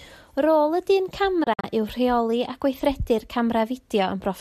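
A digital broadcast dropout hits this speech clip between 1.43 and 1.64 s: the receiver stopped getting frames it could decode, perhaps from a weak signal or failed checksums, and muted until valid data returned. Each loss fades to silence over about 8 ms, leaving short holes totalling roughly 96 ms across a 192 ms stretch, the longest 48 ms, which fits about four lost frames. Whatever was broadcast in those holes is gone.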